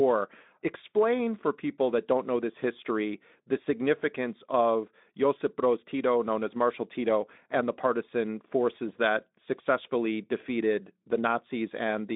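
Nothing stood out on listening to this speech.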